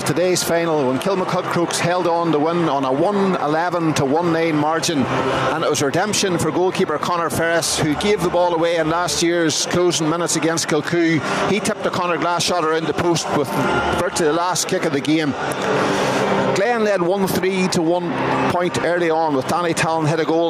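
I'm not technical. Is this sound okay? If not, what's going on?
No. Throughout the clip there is gain pumping: the level keeps being pulled down whenever something loud happens, so loud and soft parts end up closer together. The likely cause is the recording level set far too high, with an automatic limiter yanking it back on every loud moment. The result sounds squashed. Unlike a noise gate, the sound never cuts to silence.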